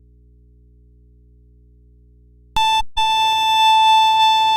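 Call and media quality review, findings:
DC offset throughout. Waveform sits shifted off zero for the whole clip. Inaudible, but it eats headroom and shows as steady energy at the spectrum's bottom.

Audio dropout to a faint residue, 0.00 to 2.57 s, already under way at start. Only mains hum, about 35 dB below the signal. Likely a lost input with a live downstream path.

AAC frame loss with muting, 2.80 to 2.98 s. A soft-edged hole of 0.17 s, fitting about eight lost frames. The decoder zeroed the spectrum, and the overlapping windows fade it out and back in.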